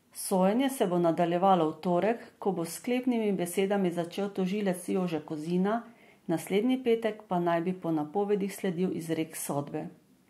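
A listener hears a speech recording with no technical faults anywhere in the signal.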